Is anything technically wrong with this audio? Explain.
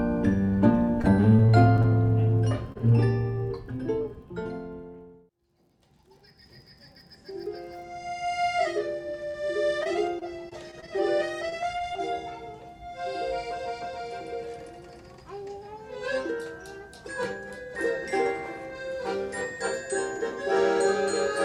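Yes. Scattered short gaps occur from 1.01 to 2.77 s and again from 9.31 to 11.96 s. About seven and then about ten packets went missing or arrived late, each tiny hole filled by extending the preceding sound. The result is brief ticks, smears and hiccups of a few tens of milliseconds.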